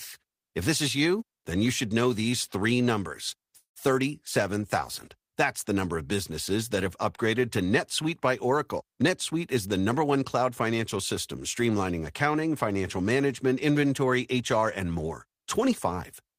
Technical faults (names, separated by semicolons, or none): call audio freeze; jitter buffer speed-up